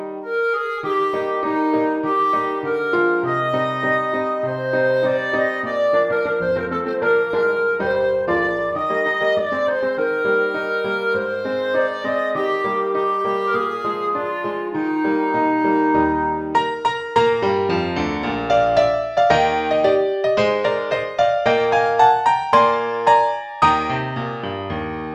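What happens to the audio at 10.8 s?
Nothing goes wrong at 10.8 s; the audio there plays through intact, with no dropout, click, distortion or other audible fault.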